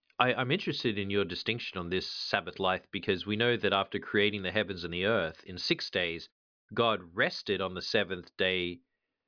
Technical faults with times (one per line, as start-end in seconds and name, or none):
none